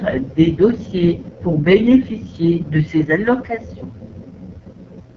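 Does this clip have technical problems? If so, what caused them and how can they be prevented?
Yes. Throughout, the speech has the rough, raspy AMR wideband (HD Voice) codec sound, which fits its lowest 6.6 kbit/s mode, with nothing above about 6.9 kHz, unlike narrowband's 3.4 kHz cutoff. Use 12.65 kbit/s or higher to prevent it.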